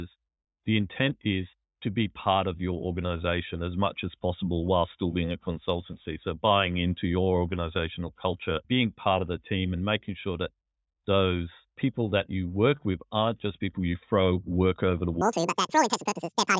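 Speech, in which the final stretch from 15.21 s to the end at 16.59 s, just after "throw work over the", is played back at a wrong sample rate. The samples are clocked out at twice the rate they were captured at, with no conversion, which fits audio recorded at 8 kHz being played at 16 kHz. Speed and pitch therefore rise together: the sound runs at 2.0 times normal speed and sits a full octave, 12 semitones, higher, giving a hurried, chipmunk-like quality.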